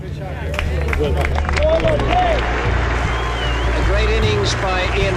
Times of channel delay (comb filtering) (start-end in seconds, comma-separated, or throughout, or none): 1.33-2.95